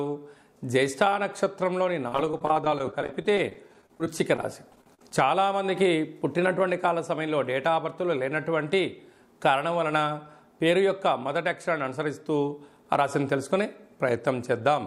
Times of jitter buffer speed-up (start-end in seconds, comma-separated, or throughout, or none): 7.68-8.17